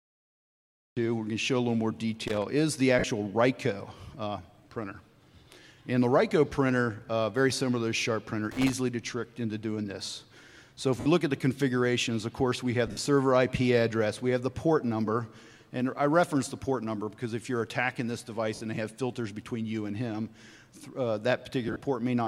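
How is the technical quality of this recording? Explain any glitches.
The recording has three distinct kinds of fault: a truncated opening, two bursts of connector crackle, and five short dropouts from lost Bluetooth LE Audio frames.

Cut-off start: the audio begins at 0 s from digital silence, and sound enters abruptly at 0.97 s with no attack or fade. Capture began late, joining a sound already underway. Unlike a dropout, this happens only once, at the very start.

Loose connector crackle: irregular scratchy bursts at 2.28–2.42 s and 8.51–8.73 s. A worn or dirty contact is making and breaking, chopping the signal. The crackle is rough and erratic, with no tonal smear, which separates it from the frame losses.

Lost LE Audio frames: at 2.99 s (50 ms), 11.00 s (60 ms), 12.87 s (90 ms spread over 120 ms, longest run about 70 ms), 18.55 s (60 ms) and 21.68 s (70 ms spread over 120 ms). The LC3 decoder repeats the last spectrum with scrambled phase, so tones blur into a brief noisy wash that fades, rather than crackling. 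The 10 ms steps fit LC3 framing.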